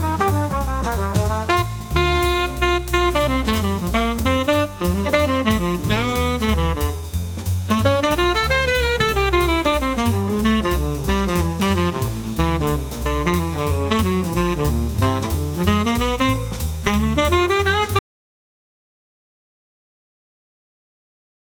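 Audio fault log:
17.99–21.4 s, audio dropout to silence: the sound cuts off mid-flow at 17.99 s and stays silent, with no room tone, until the end of the clip. The input was likely lost through a disconnected device, failed link or mute while recording continued writing silence.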